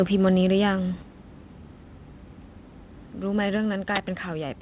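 From 0.25 to 0.29 s the loudest part of the speech is flattened at the top, giving a harsh, crackly edge. This is microphone overload. The peaks push about 2 dB past the converter's limit, so a few percent of the samples in that stretch are clipped flat. The likely cause is a microphone input gain set too high for the converter, cutting off the waveform's crests and adding distortion products that sit across the band the call path carries.

At 1.02 s the whole signal, speech and background together, drops abruptly by about 4 dB. A second, smaller drop of about 2 dB follows at 3.57 s. These are microphone volume step-downs. Each level change is a single instantaneous step with no fade, which points to the device input volume being lowered in one move, likely by the call software reacting to a microphone it found too loud or clipping.

From 3.92 to 4.01 s a short swish of static rises over the speech and then clears. 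This is a wireless microphone noise hit. It is consistent with an analogue FM radio link fading as reflected signals cancel at the receiver, letting receiver noise come up until the signal recovers about 0.1 s later. All of this sits inside a G.711 call path at 64 kbps, so nothing above 4 kHz is present.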